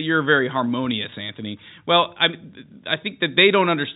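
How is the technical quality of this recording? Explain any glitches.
The speech comes through a G.711 telephone path, so nothing above 4 kHz is present, and there is one glitch.

Packet loss with pitch repetition, 1.10 to 1.12 s: a 20 ms packet went missing, and the receiver refilled it by repeating the last pitch period. It sounds like a brief held, buzzy tone rather than a silent dropout or click.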